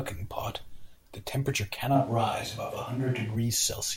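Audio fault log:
1.97–3.35 s, switch to a distant microphone: the speech abruptly turns roomy and hollow with thinner bass, then snaps back. This is likely from the close microphone dropping out and a farther one taking over, which catches more of the room. Loudness holds about steady, while background noise rises to roughly 30 dB below the speech.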